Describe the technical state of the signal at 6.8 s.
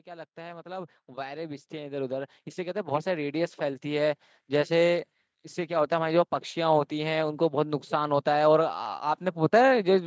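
At 6.8 s the speech is intact, with no fault present, only the usual call microphone processing that trims the lowest bass and leaves nothing above 8 kHz.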